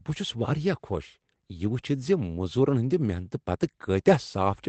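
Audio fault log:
Nothing to log for this speech clip, which just comes over a normal call path where the Opus codec at 24 kbps keeps the top end to about 8 kHz.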